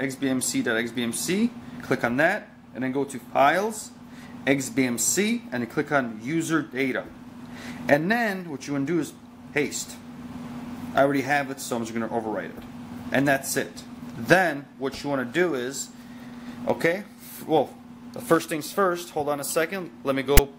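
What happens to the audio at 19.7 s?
Nothing goes wrong at 19.7 s; the audio plays through that moment intact, with no dropout, click or other fault.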